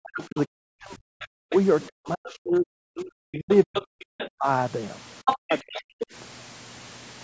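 From the start to 1.54 s, an echo canceller facing both sides talking at once likely could not tell the near talker from the loudspeaker echo, so it turned everything down. This is speech suppressed in double talk: the voice drops by as much as about 40 dB for around a second and a half. Within that stretch, at 0.2 to 0.25 s, the canceller likely left some of the far end in the microphone signal, and a short scrap of the other side's voice leaks through about 20 dB below the talker. A longer leak of similar level follows from 1.21 to 1.87 s. From 1.88 to 4.46 s the same double-talk suppression returns, dipping the talker by up to about 40 dB over roughly two seconds in total. The other side leaks through again at 2.24 to 2.32 s, about 20 dB down, and more strongly from 3.51 to 4.29 s, only about 10 dB under the talker. From 5.25 to 5.79 s the leaked voice reaches roughly the talker's own level. 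Overlapping it, from 5.33 to 6.1 s, double talk again likely causes the canceller to suppress the talker, who fades by up to about 40 dB for around 0.7 s. Across the clip, the call's microphone processing passes nothing above 8 kHz.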